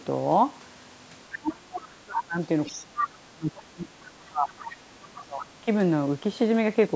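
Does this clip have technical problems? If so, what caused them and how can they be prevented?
Yes. Speech suppressed in double talk occurs at 1.36 to 2.37 s, 2.68 to 4.65 s and 4.91 to 5.49 s. The talker's level sinks by roughly 30 to 35 dB at its deepest, likely because the echo canceller, unable to separate the talker from the loudspeaker echo while both sides spoke, attenuated everything. A full-duplex device with a better-trained echo canceller, or a headset, prevents this.

The other side's voice leaking through appears in short scraps at 2.13 to 2.21 s, 2.65 to 2.78 s, 2.98 to 3.09 s, 4.65 to 4.76 s and 5.39 to 5.46 s, about 10 to 20 dB below the talker. This is likely loudspeaker playback that the echo canceller failed to remove from the microphone. Using headphones, or lowering the loudspeaker volume, keeps the far side out of the microphone.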